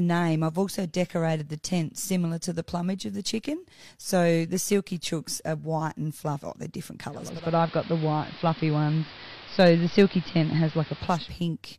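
Speech that, after "they're different", turns hissy, dull and about 4 dB different in level from 7.09 to 11.44 s: digital radio blending to analogue AM.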